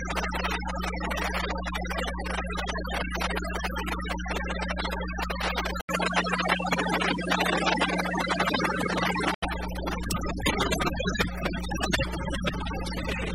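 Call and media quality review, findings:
Input switched to a poorer device, 5.81–9.42 s, likely an OS device or profile change. An 80 ms dropout at the switch, then the band stops near 12.6 kHz, with a different tone, a level shift of a few dB, and a new noise floor roughly 30 dB down. The full band returns at 9.42 s.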